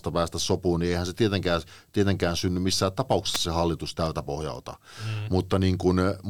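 At about 3.35 s, right after "tietenkään tietenkään synny missään", there's a sharp snap laid over the speech, a tight little burst that's over in well under 20 milliseconds and peaks up around -5 dBFS. It's an electrical switching spike, likely from a nearby switch, motor or static discharge arcing briefly and the audio line picking that up as a click on top of the speech.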